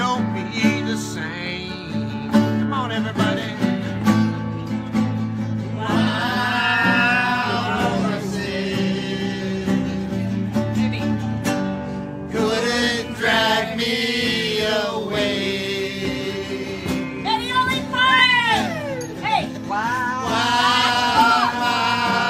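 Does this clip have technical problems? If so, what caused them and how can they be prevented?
Yes. At 18.19 s there is an underrun with held sample: the output buffer ran dry, so the converter held its last value for 2.67 ms, a gap that fits a 128-sample buffer. On a waveform this appears as a short flat line. A few milliseconds of audio were lost meanwhile. Enlarging the buffer or giving the audio thread higher scheduling priority would prevent it.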